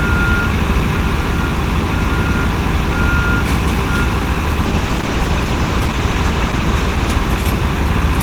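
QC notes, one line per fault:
4.66–8.00 s, call bitrate drop: The sound turns rough and muffled, with a watery edge. The encoder was pushed to spend far fewer bits, so detail is coded coarsely and the top end is trimmed away. The change fits a fall from about 32 kbps to 14 kbps. The worst stretch lasts 2.27 s. Clarity returns only as the bitrate climbs back near the end of the range.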